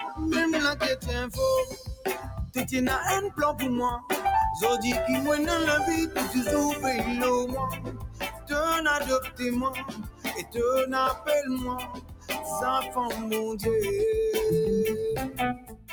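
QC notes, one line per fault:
Throughout: noise suppressor applied to music or sounds. A suppressor tuned for speech keeps treating steady parts of the audio as noise. It pulls them down while sharper onsets pass. The level swings by about 10 dB as it grabs and releases. Held material and decays thin out and pump instead of sitting still. The gain moves with what the processor judges to be noise, not with the music, so the motion sounds unnatural.
1.65–2.06 s, 2.23–2.56 s, 7.71–8.51 s, 9.20–9.41 s, 9.70–10.57 s, 11.76–12.47 s, 15.28 s to the end: sound cut by the noise suppressor. In each span the suppressor judged the sound to be noise and turned it down harder than its surroundings. The drops reach about 13 to 17 dB. The deepest are at 11.76–12.47 s, 9.70–10.57 s and 15.28 s to the end. Steady or fading material sinks and its tail ends early.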